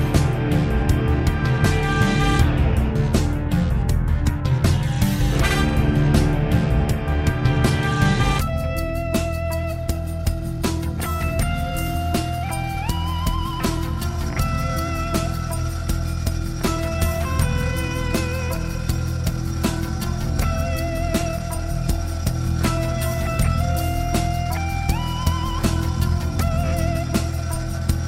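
No technical faults can be heard anywhere in the audio, and the signal holds steady without any audible disturbance at any point.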